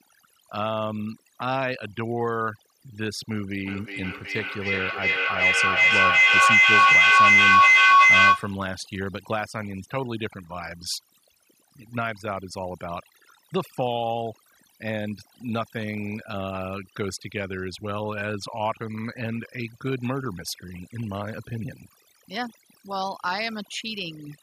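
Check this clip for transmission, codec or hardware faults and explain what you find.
Two faults are present: overdone noise removal across the whole recording, and a feedback echo between two devices from 3.62 to 8.65 s.

Overdone noise removal runs throughout. A noise reduction stage was set far too aggressively, pushing individual frequency bands down or out entirely whenever their level sat close to its noise estimate. Quieter parts of the voice fell under that threshold and were removed along with the noise. The background drops and breaks up into small twinkling specks.

The feedback echo between two devices runs from 3.62 to 8.65 s. Two devices in the same room were connected to one call, so one played back what the other's microphone had sent. That microphone picked the playback up again, and neither echo canceller could remove sound coming from the other device. Each word returns roughly every 0.4 s, thinner and more ringing with each pass. 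The loop grows loud enough that the repeats pile up instead of fading, peaking at about 13 dB above the speech.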